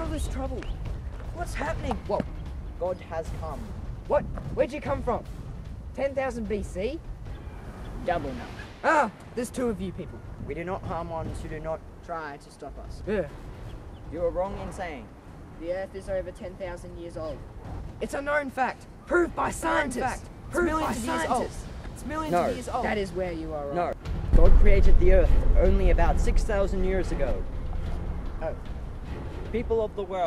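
From 19.63 to 23.93 s, a doubled audio track: a dry, quieter copy trails roughly 1.5 s behind, likely captured again by a slower path.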